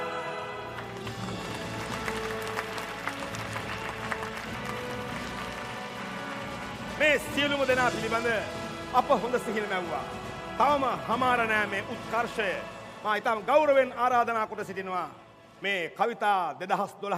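Damaged data in the compressed stream makes the decoder misread frames and resync, producing brief glitches from 0.98 to 1.03 s and from 4.51 to 4.55 s.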